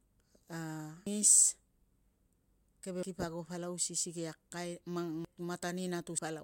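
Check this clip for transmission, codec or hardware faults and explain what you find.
Compressed frames skipped at 1.07, 3.03 (just before "kip ago palau si"), 5.25 and 6.19 s. The speech jumps ahead by half a second to a second each time, which fits whole runs of 85.3 ms frames going undecoded. It shows as an abrupt envelope break in the waveform and a vertical seam on the spectrogram.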